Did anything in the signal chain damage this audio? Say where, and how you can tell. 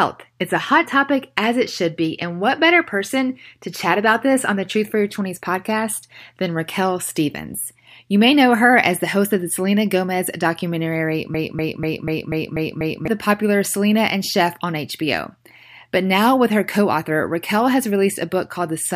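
Yes. A broken-record loop runs from 11.34 to 13.08 s, at the playback or streaming buffer stage. One 0.24 s fragment repeats exactly, seven times, back to back. A stalled buffer resending its last fragment is the likely cause. The sound that belonged there is lost.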